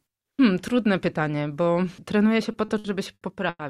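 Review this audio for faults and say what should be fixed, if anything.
Repeated stalls (stutter), 2.51 to 3.61 s: packets arrived late, so the jitter buffer emptied five times. Each time the receiver extended the last sound, adding about 280 ms in total (longest 100 ms), so nothing is lost but a quarter of that stretch drags. A deeper, adaptive jitter buffer and steadier packet delivery would prevent it.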